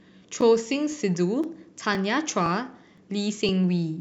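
Overlapping chunks recur at 0.41, 0.92, 1.44, 1.95, 2.46, 2.98 and 3.49 s: each 0.5 s speech chunk replays about 13 ms at its join, producing regular stuttering clicks.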